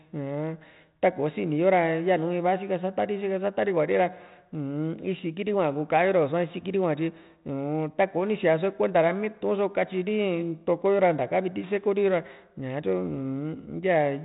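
Nothing goes wrong here; the speech just sounds the way it normally does through a 32 kbit/s G.726 ADPCM telephone path, with the top end stopping at about 3.9 kHz and only a light touch of coding grain.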